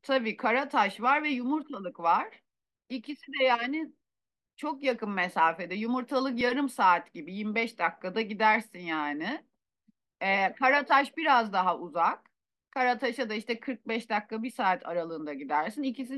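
At 6.41 s the speech stops for a split second, about 1.6 ms, with the waveform frozen flat rather than dropping to silence, so there is barely any click, just a tiny hitch. This is an underrun with held sample: the output buffer briefly ran dry and the converter kept holding its last value until fresh data arrived. No audio appears to have been skipped, since playback picks up where it left off and the join back in is soft.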